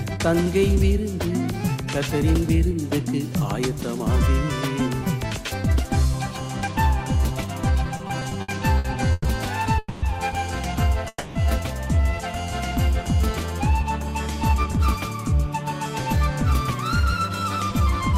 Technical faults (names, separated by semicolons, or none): repeated stalls (stutter); call audio freeze; jitter buffer speed-up